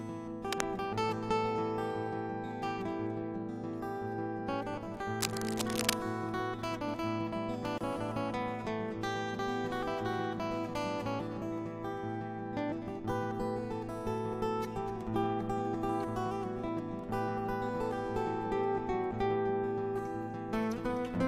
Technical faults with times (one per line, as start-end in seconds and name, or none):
0.46-0.66 cable scratch noise
5.21-5.97 cable scratch noise
7.78-7.81 gap at a join of encoded pieces